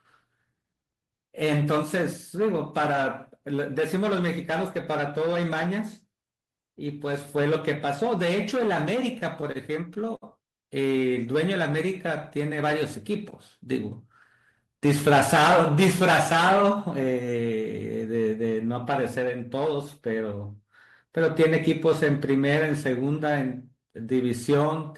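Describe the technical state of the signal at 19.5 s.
At 19.5 s the speech signal is intact, with no audible fault at that moment.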